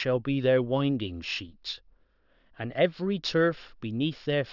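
Throughout the speech, sibilants sound gritty and metallic, with stray tones folding down from the 6 kHz band edge at around 20 dB below the voice. This is aliasing: the rate was lowered without filtering, which fits a drop from 24 kHz to 12 kHz.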